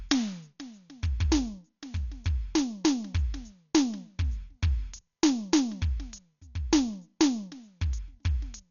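From start to end the music sounds dull, with nothing above 6.9 kHz and a rough, fluttering noise around tones. This is likely Dolby Digital compression at a low bitrate, around 48 kbps. The noise-filled gaps set it apart from a simple low-pass cut.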